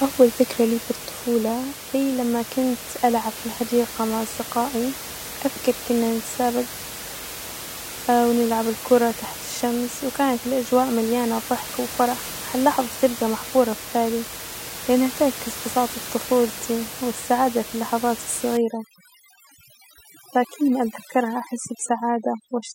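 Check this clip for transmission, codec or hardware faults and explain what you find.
One fault turns up, at the end of the clip, over room noise sitting about 12 dB below the speech. From 18.57 s to 22.75 s there is overdone noise removal: an over-aggressive noise reducer turns off frequency bands near its noise estimate, leaving near-silent, twinkling gaps and taking quiet parts of the speech with them. Unlike codec artefacts, the damage tracks the quiet parts of the signal rather than appearing as steady smearing throughout.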